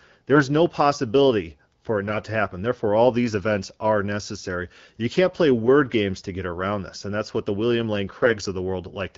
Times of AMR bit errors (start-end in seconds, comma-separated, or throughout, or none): 0.35-0.41, 8.17-8.35